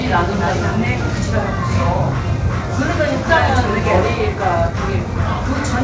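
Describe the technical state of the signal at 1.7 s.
At 1.7 s the audio is intact, with no fault present; the sound passes through the WebRTC call path as normal, and like the rest of that path's output it carries nothing above 8 kHz, which fits a G.722 call codec.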